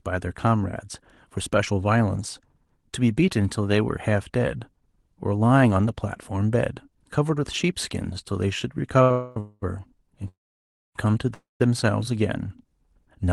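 Speech over a call codec whose top end stops near 12 kHz, with a short stall from a late packet at 9.02–9.11 s: the sound is held about 78 ms, then resumes, with nothing lost. Call audio freezes follow at 9.11–9.37, 9.40–9.63, 10.28–10.96 and 11.34–11.61 s. Each is longer, and the held sound fades to a buzz and then, in all but the first, to silence, almost entirely so in the 10.28 s one. The likely cause is a jitter buffer run dry by delayed packets, with the audio delayed rather than cut.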